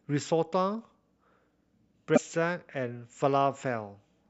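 At 2.13 to 2.18 s the speech is broken by a short glitch lasting about 46 ms. This is damaged data in a compressed stream: corrupted bytes make the decoder misread those frames, lose sync and hunt for the next valid frame header.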